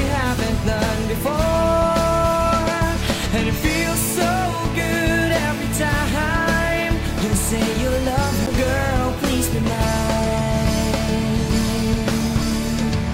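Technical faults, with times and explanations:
8.46 s, CD skip: a tick and a mute of a few milliseconds, then the sound resumes elsewhere as the laser jumps to another turn of the spiral.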